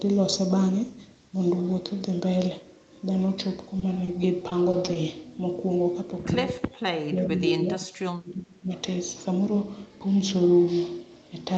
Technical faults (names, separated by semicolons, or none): repeated packet loss (robotic sound); speech suppressed in double talk